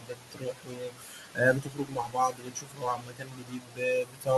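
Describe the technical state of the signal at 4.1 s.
At 4.1 s the speech cut by the noise suppressor is under way, running from 4.02 to 4.29 s. The suppressor mistook this stretch of speech for background and pulled it down with the noise, by about 19 dB at its deepest, so the sounds there come out swallowed and faint. Unlike a dropout, the sound thins and sinks rather than stopping abruptly.

The noise suppressor artifacts that run through the clip are also present at this moment. The suppressor lowers whatever bands it judges to be steady noise, frame by frame, so the residue of the room noise, which sits about 10 dB below the speech, sinks between the words and rises under them.

A distortion also sits on the signal here, with a noise that fills the quieter moments instead of letting them fall silent. Its likely cause is a stuck bit, where one data bit is held fixed and knocks about half the sample values off by that bit's weight. 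Because the error follows the waveform's own pattern, it sounds tied to the signal, unlike clipping, which only breaks up on the loudest peaks.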